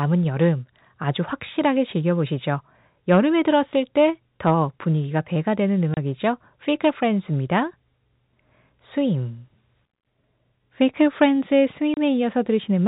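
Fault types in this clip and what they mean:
Packet loss filled with silence: two abrupt 30 ms holes of dead silence, near 5.94 s and 11.94 s, each matching one lost packet, with hard edges instead of fading or being smoothed over.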